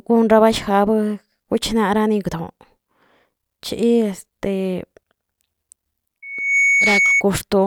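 At 6.22 s a loudspeaker feedback squeal begins and runs to 7.24 s. The microphone is picking up the loudspeaker it drives, and at 2.2 kHz the loop gain has passed unity, so that one frequency reinforces itself on every trip around the loop. It swells from nothing to a steady, piercing tone in under half a second and settles at roughly the same loudness as the speech, sitting on top of it until the loop is broken.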